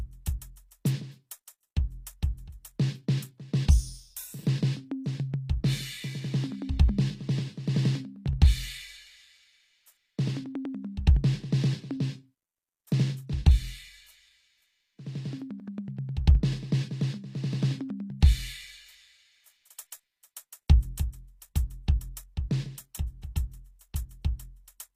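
Throughout the music, the treble sounds bright but synthetic and gritty, with cymbal-like detail turning metallic. This points to HE-AAC compression, likely at a low bitrate around 24 kbps, where spectral band replication rebuilds the top end from copied lower bands instead of coding it.

Pre-echo appears at 17.89 s, 23.21 s and 23.79 to 23.81 s: brief hiss smeared ahead of sharp attacks by 15, 17 and 20 ms. Block-wide quantisation noise leaks into the quiet instant before each transient and softens it.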